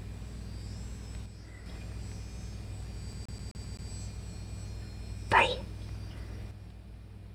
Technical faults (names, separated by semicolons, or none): one channel drops out; CD stuck on one turn